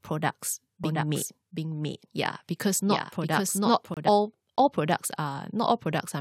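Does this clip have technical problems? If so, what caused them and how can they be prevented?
Yes. There's a doubled audio track from 0.84 to 4.09 s: a second, clean copy of the speech trails roughly 0.7 s behind at about 5 dB down, then cuts off abruptly just before "all all products". It's likely a second capture path or misaligned edit layering the same signal twice. To prevent this, route each source through one path only and check the edit for stray duplicate clips.

There are also gaps between stream segments: a hard-edged 4.6 ms dropout at 1.94 s, and a 27 ms silence from 3.94 to 3.97 s right before "all all products". Their spacing fits 2-second segments whose timestamps don't quite meet. To prevent these, keep segment timestamps continuous when packaging so each one starts exactly where the last ended.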